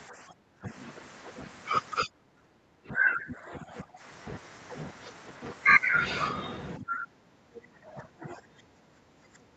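From 0.09 to 0.69 s, 2.06 to 4.04 s, and 6.78 s to the end, the speech dips and breaks up. It falls by roughly 15, 20, then 25 dB. This is likely speech suppressed in double talk. The echo canceller mistook overlapping talk for echo.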